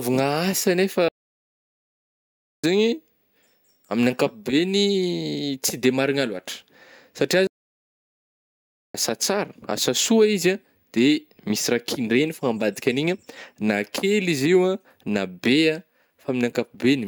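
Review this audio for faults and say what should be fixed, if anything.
Playback stalls: the speech drops to silence from 1.08 to 2.64 s (1.55 s) and from 7.47 to 8.95 s (1.47 s, before "tsara asa"), likely from player buffer underrun or a blocked thread. Prevent it with a deeper playback buffer and by keeping the audio thread free of blocking work.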